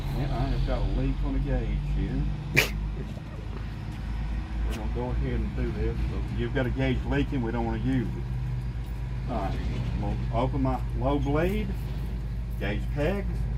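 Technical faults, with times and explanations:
No technical faults can be heard anywhere in this clip. Nothing in the audio calls for a time or an explanation.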